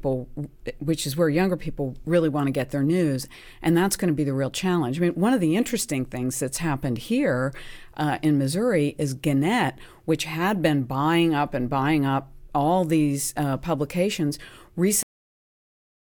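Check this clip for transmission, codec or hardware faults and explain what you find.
The speech has a cut-off end: at 15.03 s it stops in the middle of a sound and drops straight to digital silence, with no decay, for the final second. The last audio buffers were never written or played out, so the recording simply ends there.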